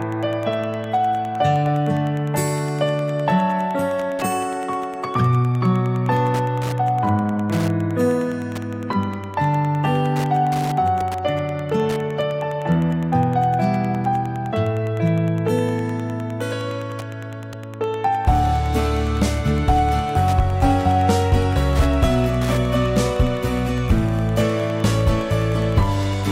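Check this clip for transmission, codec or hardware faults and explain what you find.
One hardware fault runs through the whole clip: Wi-Fi interference. A Wi-Fi radio sitting near the audio circuitry is radiating its beacon every 102.4 ms, and the circuit is rectifying that RF energy into the audio band. Each beacon lands as a small tick, so the result is a steady ticking just under ten times a second from start to finish, sitting roughly 25 dB below the wanted sound.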